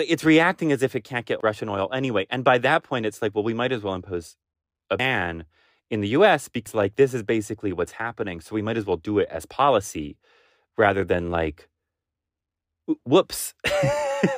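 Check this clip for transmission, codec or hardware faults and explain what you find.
Two dropouts of the compressed frames skipped kind break up this speech clip. The first is at 4.99 s, where about a tenth of a second vanishes, and the second at 6.67 s, where roughly a fifth of a second is lost. Whole coded frames never reach the output, either missing or rejected as corrupt by the decoder, so the speech leaps forward by a block of frames.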